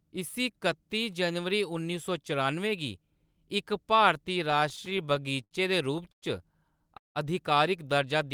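From 4.51 to 5.53 s, just after "इक भारती", the speech drags and stutters through repeated stalls. Thirteen brief hitches break it up. The longest lasts about 70 ms, and together they fill about 193 ms, close to a fifth of that second. Each hitch stretches the last bit of sound before the speech picks up again, so nothing is lost, only delayed. Packets kept arriving late, and the jitter buffer ran dry over and over.

Two call audio freezes follow. At 6.12 to 6.24 s the speech drops into about 100 ms of silence. At 6.97 to 7.17 s it stops for about 180 ms, nearly all of it silent. After each gap the speech resumes exactly where it halted, so a pause has been inserted rather than anything cut out. The likely cause is packets held up in transit, leaving the jitter buffer empty until they arrived.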